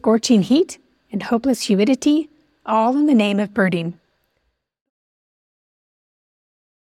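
The speech recording shows no technical faults, and its ending is a smooth, editor-style fade out that begins around 4 s and is complete by 4.9 s.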